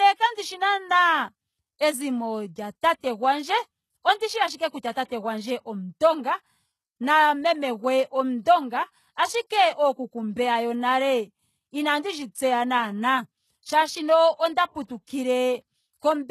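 The whole clip has that HE-AAC compression sound, likely a low-bitrate stream around 16 kbps: nothing above 12.3 kHz, and the rebuilt treble makes sibilants gritty and metallic. Pre-echo shows up at 2.81, 4.18, 4.56 and 4.92 s, where block-spread quantisation noise leaks a brief hiss, 22 to 40 ms long, ahead of each attack and softens it.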